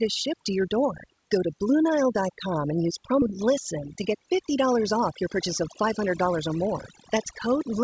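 Throughout, the speech sits over a lowered background with twinkling specks: overdone noise removal, where frequency bands near the noise estimate were pushed down or switched off, taking quiet parts of the voice with them.

At 3.22 s the speech jumps forward with no gap, losing roughly a third of a second. This skip ahead comes from a stretch being dropped while later audio was already waiting.

From 5.13 to 6.93 s the speech runs about 6% faster at unchanged pitch and sounds hurried. This is a jitter buffer speed-up: short pitch-period pieces, around a tenth of a second in total, were cut to reduce delay.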